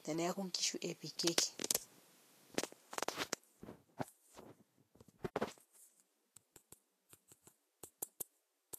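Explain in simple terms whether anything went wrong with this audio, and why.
Throughout the speech, from start to finish, there is plainly audible Vorbis compression damage, likely from a low-quality encode. Nothing is left above about 14.2 kHz, and the remaining treble is coded so coarsely that its detail turns into hiss and grain.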